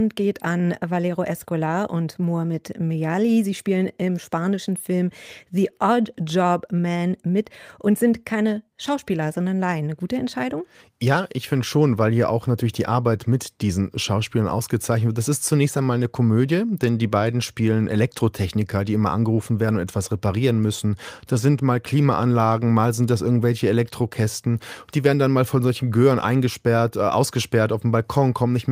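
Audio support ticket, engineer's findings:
No faults found in recording.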